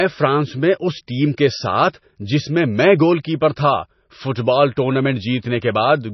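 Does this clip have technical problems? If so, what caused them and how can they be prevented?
Yes. Throughout the speech, nothing is present above 5.9 kHz, and the sound has heavy watery, swirling artefacts as weak frequency components flicker between frames. This is likely MP3 compression at a very low bitrate, one that fits roughly 24 kbps, forcing the encoder to drop treble and discard detail. Encoding at 128 kbps or higher, or storing the audio losslessly, would prevent it.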